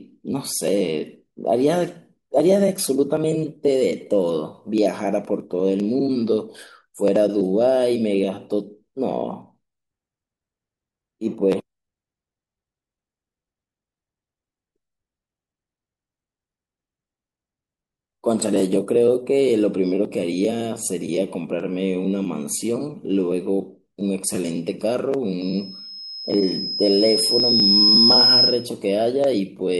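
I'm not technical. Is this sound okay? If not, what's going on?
No, not quite. From about 25.41 to 28.70 s there's a loudspeaker feedback squeal: the microphone is hearing its own loudspeaker and looping it back. A high whistle near 5.1 kHz builds over roughly three seconds until it's much louder than the speech.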